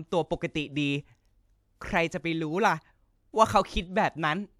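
No technical fault is audible anywhere in the recording.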